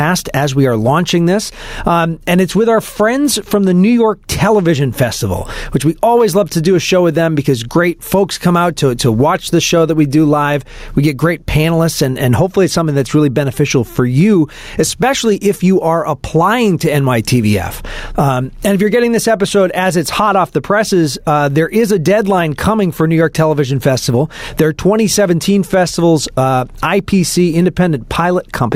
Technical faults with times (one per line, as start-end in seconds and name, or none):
0.00-28.75 gain pumping